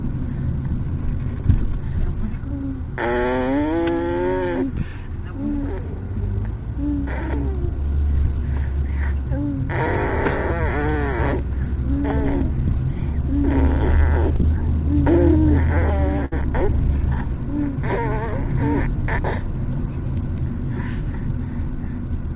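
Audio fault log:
14.36 to 14.41 s, short concealed packet loss: 40 ms arrived too late, so the receiver stretched the preceding sound over the gap and blended back, leaving a brief smear.
16.25 to 16.33 s, burst of packet loss: 60 ms was lost in a row; the receiver continued the last sound, fading it, then resumed later with that stretch gone.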